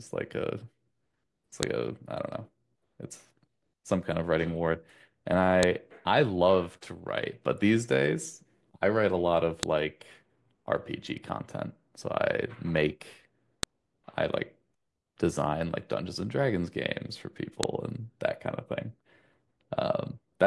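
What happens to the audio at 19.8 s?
Nothing goes wrong at 19.8 s; the speech runs through that moment intact, with no dropout, click or distortion.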